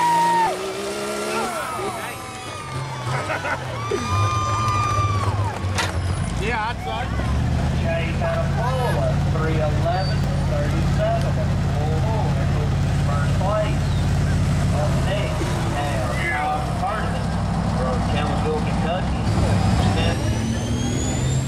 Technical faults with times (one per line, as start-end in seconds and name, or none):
0.47 dropped buffer (overrun)
1.45 dropped buffer (overrun)
10.24 dropped buffer (overrun)
19.80 dropped buffer (overrun)